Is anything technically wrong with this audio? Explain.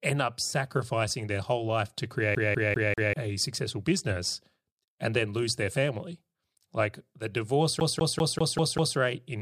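Yes. The speech has a CD stuck on one turn, twice. From 2.35 to 3.13 s, after "their whole life to", a roughly 196 ms slice repeats 4 times before "a successful business and" resumes. From 7.80 to 8.97 s, after "the divorce", the same 196 ms slice length repeats 6 times before "in business". A scratch keeps knocking the laser back one track, so the loop length stays fixed and a brief mute marks each jump. That even, rapid stutter of a skipping disc sets it apart from a simple dropout or a single repeated word.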